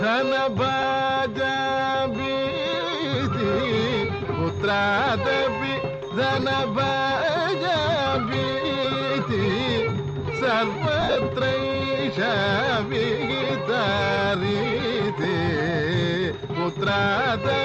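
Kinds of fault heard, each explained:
lost LE Audio frames: Bluetooth LE Audio frames went missing, and the decoder patched each gap by replaying the last spectrum with scrambled signs. Brief noisy smears sit at 0.82 s and 15.23 s. Scattered gaps blur 11.01 to 11.17 s, the longest about 50 ms.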